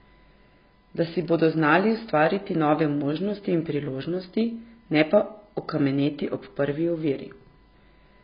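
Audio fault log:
throughout USB whine. A steady tone sits at 1 kHz, roughly 40 dB below the speech. Its pitch never drifts. That fixed pitch matches the 1 ms frame rate of a USB bus. Each frame draws a pulse of current. The pulses ride on the shared power or ground, so they leak into the audio path as a constant whine. It is quiet.
throughout AAC compression, likely the cause of the dull, smeared sound. Nothing is present above 5.2 kHz, so the speech has no air or crisp sibilants. The damage is heavy. Consonants fizz and sustained sounds warble. This is what AAC-LC does when it is short of bits. It lowers its cut-off and drops or roughly fills bands it cannot afford to code. The level of loss fits a very low bitrate, around 16 kbps.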